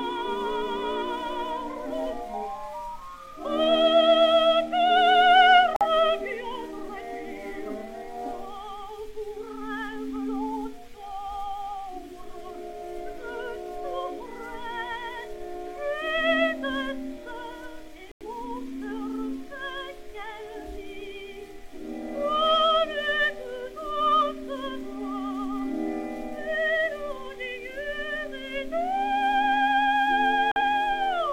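Abrupt holes of silence cut in at 5.75 to 5.86 s, 18.12 to 18.27 s and 30.51 to 30.62 s, with timing intact: corrupt frame muted, where damaged compressed frames were rejected and replaced by silence.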